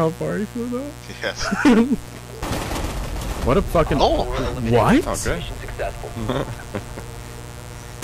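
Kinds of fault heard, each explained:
Mains buzz: A dimmer, rectifier or unshielded run has let sharp switching spikes from the 60 Hz supply into the signal path, two spikes in every mains cycle. Because those spikes are so abrupt, they carry a dense ladder of 60 Hz harmonics stretching up into several kHz, so the clip has a steady, raspy buzz rather than a smooth hum, running the full length at about 15 dB below the wanted sound.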